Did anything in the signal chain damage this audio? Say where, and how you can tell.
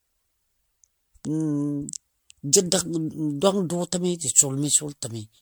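Yes, generation loss at the codec stage. The speech sounds swirly, hollow and smeared throughout, with nothing above 19.9 kHz. This likely comes from about ten MP3 re-encodes near 100 kbit/s.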